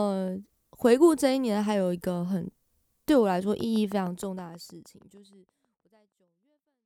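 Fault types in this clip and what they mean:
Train of clicks: steady ticking, about 6.4 per second, roughly twenty clicks standing out above the speech near the end; likely interference from nearby equipment.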